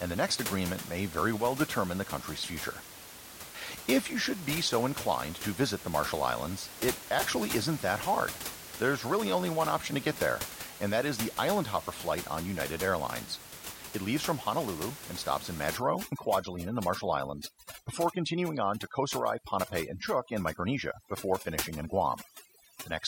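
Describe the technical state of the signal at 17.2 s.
At 17.2 s the signal is under overdone noise removal, running from 15.77 s, just after "and stops in", to the end. Bands near the noise floor are cut hard. The room noise, about 11 dB below the speech, collapses into twinkling specks.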